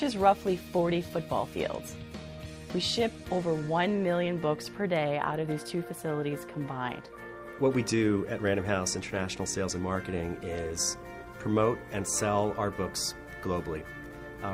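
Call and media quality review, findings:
Clock drift between sender and receiver, throughout: sender clock running a few percent fast, around 4 percent. Jitter buffer keeps filling, so the receiver has to keep trimming audio to stay in step. Component: far-end capture clock versus our playout.

Repeated timing corrections, 0.09 s to 14.36 s: small uneven hiccups, audio pushed along at about 105 percent speed. Receiver cutting short pieces, always the same direction, irregular spacing. Component: jitter buffer or playout-side time-scale adjustment compensating that drift.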